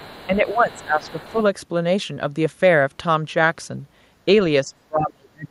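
Speech, with a faint second voice, the other side's voice leaking through, from 0.0 to 0.84 s and 1.02 to 1.44 s, roughly 25 dB below the talker, likely from loudspeaker echo the canceller left behind. Speech is suppressed in double talk from 0.27 to 1.37 s, dipping by around 10 dB, and from 4.63 s to the end, where it drops much deeper, likely because the echo canceller turned down the talker along with the echo.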